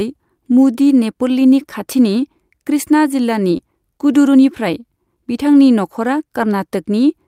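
At 3.57 to 3.61 s there is a short concealed packet loss. About 20 ms of the speech never arrived at the decoder in time. The receiver covered the gap by extending the sound that came just before it, generating roughly 12 ms of substitute signal. It then faded back into the real audio. The result is a brief smear in the speech, a momentary blur where the true sound should be.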